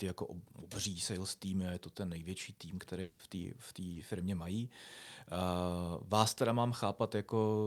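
At 3.01 s, right after "to ten největší tým", the speech breaks off for about 0.2 s, until 3.21 s, and resumes at "té v". Through the gap the last sound is stretched into a fading buzzy hiss rather than real speech, and it never decays to silence before the signal returns. This is most likely a long network dropout: roughly 180 ms of audio failed to arrive, the receiver synthesised a continuation across the whole hole, and the lost portion is simply absent.

A second, much briefer fault occurs at 3.93 s, between "té v" and "firmě mají", lasting about 40 ms to 3.97 s. It is heard as a short smear or wobble in the speech. This is short concealed packet loss: about 20 ms of data missed the decoder, which extrapolated the preceding sound to bridge the gap and then crossfaded back into the received signal.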